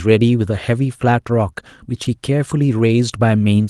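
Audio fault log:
Audio fault log:
2.03–2.07 s, short concealed packet loss: about 20 ms of audio never arrived in time, and the receiver bridged roughly 15 ms of it by extending the preceding sound before crossfading back into real signal. It comes across as a brief smear or wobble. On a spectrogram the harmonics or noise texture run on unnaturally smooth and flat for that sliver. The waveform shows a slightly too regular continuation where natural variation should be, then a soft seam.
2.05 s, 2.78 s and 3.12 s, lost packet rebuilt from error correction: at each point a 20 ms frame went missing, but the next packet carried a coarse, low-rate copy that the Opus decoder played instead, so nothing drops out. Those three moments sound momentarily grainier and noisier, a roughness rather than a gap. On a spectrogram each appears as a thin vertical band of smeared, speckled energy with blurrier harmonic detail. 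The waveform stays continuous but looks slightly fuzzier for one frame. The first overlaps the tail of the concealed stretch. The band limit of about 12 kHz from the call path runs through the whole clip.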